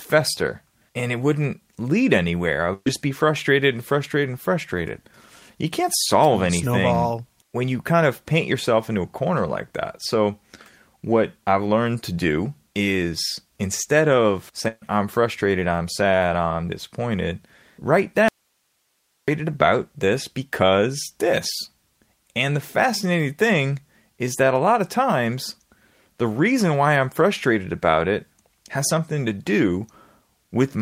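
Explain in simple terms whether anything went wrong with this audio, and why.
Burst of packet loss at 2.73 to 2.88 s, after "anywhere I", and at 14.68 to 14.84 s, after "do is instead of". Each time a stretch of sound went missing in transit, roughly 120 and 140 ms. The receiver stretched the last sound and let it fade, then jumped ahead.

Audio dropout to a faint residue from 18.28 to 19.28 s, after "sad I'm disappointed write". The speech cuts out abruptly for about one second, leaving only very faint hiss, then resumes. The likely cause is that the signal was lost while the line itself stayed open.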